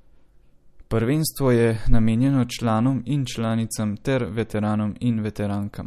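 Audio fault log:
Throughout: MP3 compression. The speech sounds watery and swirly, with sibilants turning metallic and chirpy and consonant attacks softened and smeared, while nothing survives above about 13.8 kHz. This is likely the work of a low-bitrate MP3 encoder, which fits roughly 48 kbps: starved of bits, it cuts the treble at a fixed point and drops weaker frequency lines, and those lines flicker on and off from one frame to the next.
1.93 s: hard clipping. A brief crackle sits on the peaks just before "namenjeno članom in članicam". The waveform ran about 1 dB beyond what the signal path could carry, so the tops of those peaks were cut flat. The squared-off edge adds a burst of high harmonics, which is heard as the crackle. The overload is small and momentary, so it never builds into sustained fuzz.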